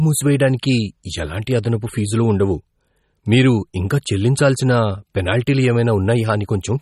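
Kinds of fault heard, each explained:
MP3 compression: the speech is likely MP3-coded at a rate that fits about 32 kbps, sounding plainly watery and swirly, with smeared onsets. A spectrogram shows a flat ceiling at 15.5 kHz and weak bands blinking on and off frame to frame.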